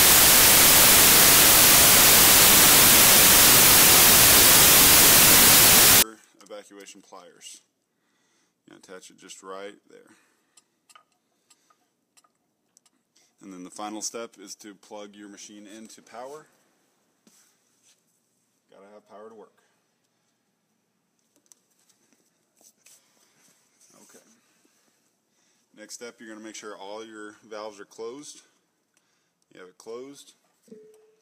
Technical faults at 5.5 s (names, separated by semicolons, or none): samples built from the wrong bytes